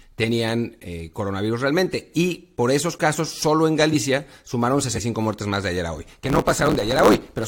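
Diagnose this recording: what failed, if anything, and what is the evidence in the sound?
Compressed frames skipped, at the codec or storage stage. At 4.95 to 5.00 s, just before "muertes más de ayer", the speech jumps forward by about 150 ms of material. Whole compressed frames never reached the output, either missing from the file or rejected by the decoder as damaged.

Block size mismatch (truncated), at the driver or buffer stage. From 6.16 s, right after "de ayer a hoy", to the end, a 109 Hz buzz sits under the speech. The speech runs 1.16 times fast while keeping its timbre. One stage writes blocks larger than the next reads, and each block's tail is discarded. The buzz marks the block rate, which fits a 512-sample written block.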